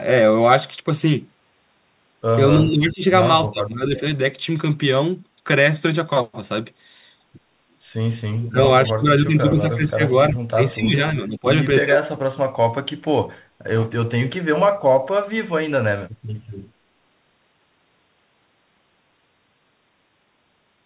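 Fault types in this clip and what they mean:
Speech suppressed in double talk: the speech dips by about 15 to 25 dB in bursts, likely an echo canceller turning down both sides during overlapping talk.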